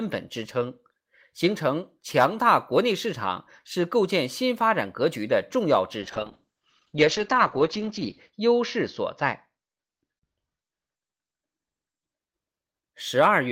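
A call bitrate drop hits this speech recording from 6.04 s to 12.25 s: the call's bandwidth estimate collapsed and the encoder was throttled, and the sound fits a fall from roughly 32 kbps to about 8 kbps. Coding becomes coarse and rough, and the top end is cut from a 20 kHz band to 8 kHz, so the speech turns muffled and watery. The worst stretch lasts 2.28 s before the bitrate climbs back.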